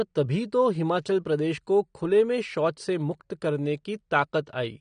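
Throughout, the speech carries the marks of AAC compression, likely an AAC-LC encoder working at a low bitrate, around 32 kbps. Short of bits, it discards everything above 9.7 kHz, so the sound is plainly dull and smeared, with a warbling, fizzy edge on sibilants.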